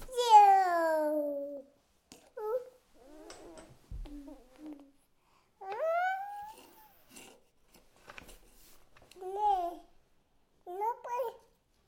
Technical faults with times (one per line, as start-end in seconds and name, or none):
none